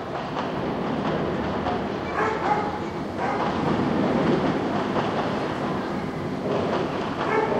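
A recording of everyday sounds with no technical faults to point out. Nothing in it calls for a time or a cause.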